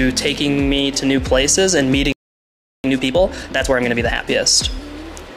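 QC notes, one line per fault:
2.12–2.84 s: playback stall, sound stops mid-flow for about 0.72 s, flat silent gap in waveform and spectrogram; likely the player starved of data.
2.84–4.26 s: time-compressed catch-up, audio hurried at 1.5× with normal pitch; spectrogram shows unchanged harmonic spacing, denser events, small splice seams.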